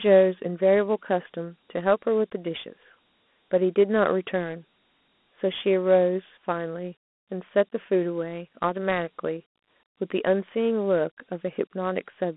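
From start to finish the speech carries the unmistakable stamp of Dialogic VOX ADPCM, the 4-bit OKI-style coding used for phone menus and voicemail. The audio sits in a narrow telephone band, roughly 200 Hz to 3.5 kHz, with nothing at all above 3.8 kHz. The quantisation damage is plainly audible: a gritty, grainy hiss rides along with the speech, which fits a 32 kbps stream.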